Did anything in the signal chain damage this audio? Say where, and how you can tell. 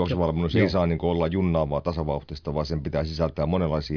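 No, nothing audible in this speech clip points to damage at any stage of the chain.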